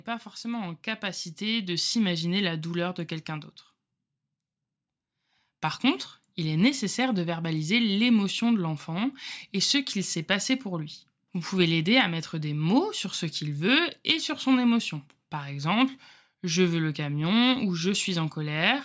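Automatic gain rising runs from 0.41 to 7.54 s, ending just before "l'émotion de l'enfant et". The gain control judged the input too quiet and lifted its level by about 8 dB over those seconds, so the speech and the room noise behind it swell together. The call's microphone processing can also be heard, with nothing above 8 kHz.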